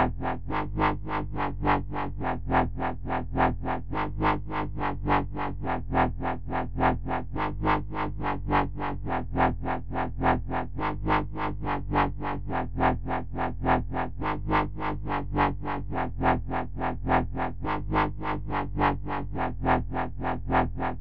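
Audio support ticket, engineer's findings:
No fault found in the signal path: level, continuity and timing hold steady throughout, with no dropouts, clicks, distortion or drift to trace to any component.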